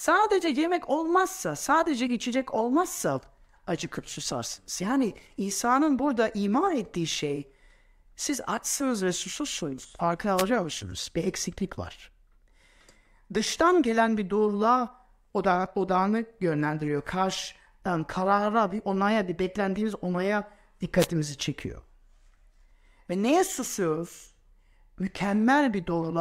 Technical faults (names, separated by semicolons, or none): wireless microphone noise hit